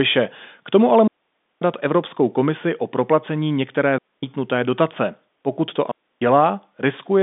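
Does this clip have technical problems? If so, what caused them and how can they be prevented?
Yes. Three digital wireless dropouts cut the speech to near silence: 1.07 to 1.62 s right after "tomu ale", 3.98 to 4.23 s after "komisi o proplacení některé", and 5.91 to 6.22 s, lasting about 0.54, 0.25 and 0.30 s. The receiver lost too much data and muted with a very quick fade, so the waveform drops to a flat line and the spectrogram shows clean vertical gaps with no noise bursts at either edge, against the narrow telephone band. Prevention: keep the transmitter in line of sight and within range, on a clear channel.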